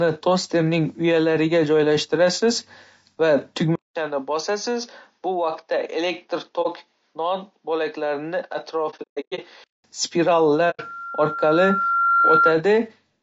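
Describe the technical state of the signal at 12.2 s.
At 12.2 s a loudspeaker feedback squeal is sounding: a single tone at 1.4 kHz that appears at 10.55 s, swells over roughly a second and a half, and holds until 12.58 s, sitting around 5 dB above the speech. The microphone is re-capturing its own loudspeaker, and the loop gain at that one frequency exceeds unity.

Underneath, the speech carries plainly audible coding damage, rough and grainy with noise filling the gaps between harmonics. The sound fits low-delay AAC compression, likely AAC-ELD at a low bitrate, whose short frames resolve pitch harmonics poorly.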